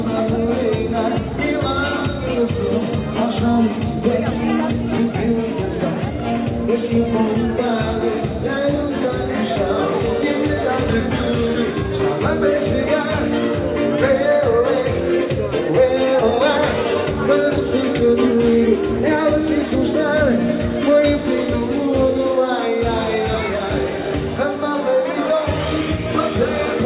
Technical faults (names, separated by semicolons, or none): none